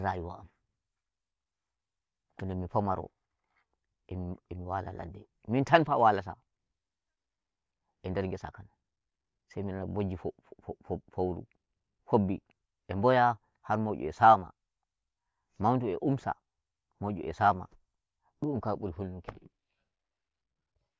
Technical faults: none

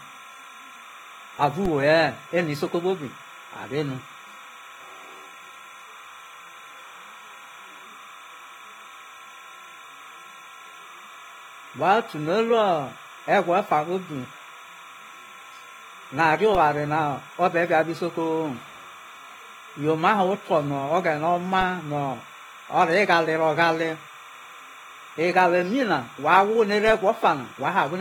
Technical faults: timecode bleed; AAC compression; DC step

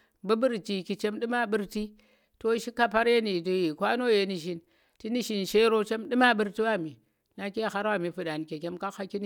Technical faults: none

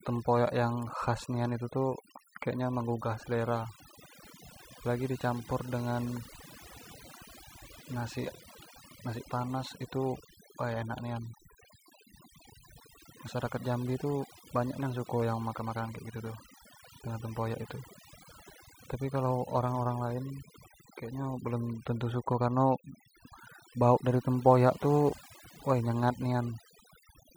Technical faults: overdone noise removal

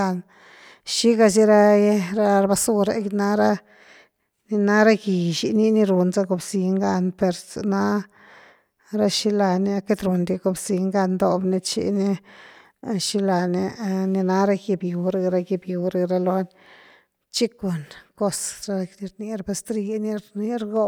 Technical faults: none

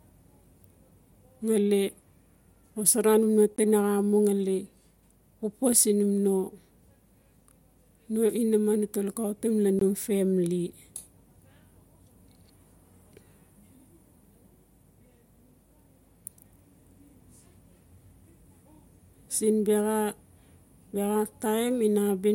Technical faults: block of digital silence

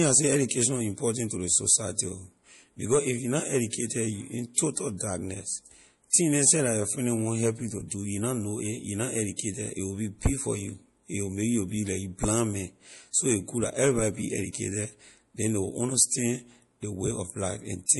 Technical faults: MP3 compression; pre-echo

